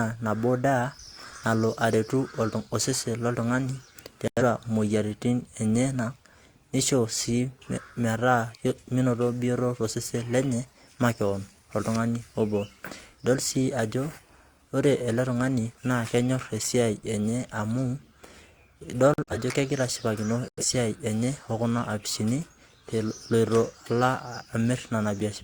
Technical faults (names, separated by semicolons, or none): corrupt frame muted